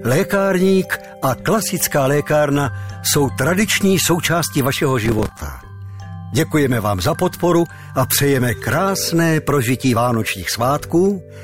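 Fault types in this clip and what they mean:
processor overload crackle: From about 5.05 to 5.37 s the processor falls behind its deadlines for filling each short audio buffer, a few milliseconds long, and a dozen or more run out in a row. Each miss repeats a stale chunk with hard edges, giving a gritty tearing crackle. On a waveform this shows as abrupt steps and repeated fragments; a spectrogram shows thin vertical broadband streaks clustered across that third of a second.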